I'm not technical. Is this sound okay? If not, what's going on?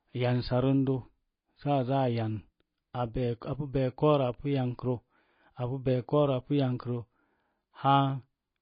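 No. Throughout the speech, the sound is dull and plainly watery, with nothing above about 5.1 kHz, so s sounds lose their crispness. This is likely heavy MP3 compression, where the encoder discards treble and faint detail to save space.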